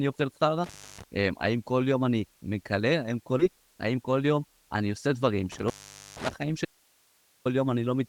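From 0.64 to 1.04 s an intermittent contact breaks the speech: a loose plug or cable opens for about 0.30 s, so the sound cuts out with crackle at both edges and only faint hiss fills the hole. On a waveform this shows as a sudden collapse to a thin noise band, bracketed by sharp spikes. On a spectrogram there are broadband vertical clicks at each edge, with an empty, low-level region between them.

At 3.39–3.41 s a skip ahead joins two points in the speech almost directly, with no fill at all. Roughly a second of audio is simply missing, because a stretch was dropped while later audio was already waiting. The result is an abrupt jump rather than a pause. The waveform shows no gap, just a splice where the envelope changes shape. In the spectrogram, the harmonic patterns on either side do not line up.

From 3.52 to 4.76 s a jitter buffer speed-up follows. The receiver, holding more delay than it wanted, trimmed short pitch-period pieces again and again, removing about a tenth of a second. 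The speech runs at about 107% of normal rate with its pitch unchanged, so it sounds slightly hurried. The spectrogram shows harmonics at normal spacing but syllables packed closer together in time.

From 5.52 to 6.33 s a second intermittent contact occurs, with the line open for about 0.47 s. Again there are crackles at the make and break points and faint hiss in between. It looks the same as the first: edge spikes on the waveform and broadband streaks on the spectrogram.

From 6.65 to 7.45 s there is an audio dropout to a faint residue. For about 0.80 s the speech vanishes abruptly, leaving only hiss at about 40 dB below the normal level. The likely cause is the source signal being lost while the path after the break stayed live. The waveform drops to a flat noise floor with hard edges, and the spectrogram shows a uniform faint haze with no harmonic structure.

Throughout the clip, the spectrum stops near 12 kHz with coding noise, which fits an Opus call codec at around 32 kbps.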